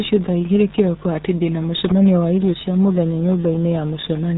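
Throughout the speech, a RealAudio 14.4 codec squeezes the signal down to what sounds like about 8 kbit/s, discarding everything above 3.8 kHz. Heavy coding damage leaves the speech muffled and dull, with a gargling, watery texture.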